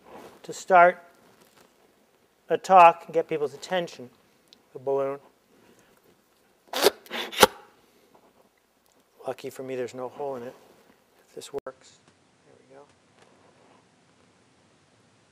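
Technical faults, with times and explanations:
11.59–15.31 s, likely input switched to a poorer device: after an 80 ms gap, level drops about 10 dB, the band ends at 11.4 kHz, and noise appears roughly 30 dB down.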